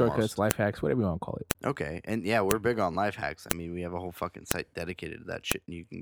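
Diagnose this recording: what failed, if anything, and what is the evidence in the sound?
The storage or stream-assembly stage failed: 1-second WAV pieces were joined with their headers left in, so the file header played as audio. Sharp, loud clicks land at 0.51, 1.51, 2.51, 3.51, 4.51 and 5.52 s, just before "hacks whatever you want" and "big on life hacks", and right after "have a whole fucking". They recur exactly once a second, regardless of the speech. A waveform shows a brief spike at each boundary, and a spectrogram shows a thin full-band vertical line.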